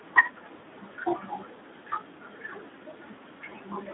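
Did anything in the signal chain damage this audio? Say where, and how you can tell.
Yes. Codec stage: Speex coding makes the speech hoarse and noisy throughout, which fits about 11 kbps. The spectrogram shows energy confined to 200 Hz to 3.6 kHz.

Network stage: VoIP packet loss concealed by the speech codec at 3.49 to 3.55 s. Extrapolating over one 20 ms frame leaves a fading smear, visible as a decaying waveform envelope.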